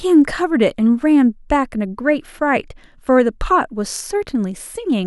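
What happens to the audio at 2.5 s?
Nothing goes wrong at 2.5 s; the speech plays through that moment intact, with no dropout, click or distortion.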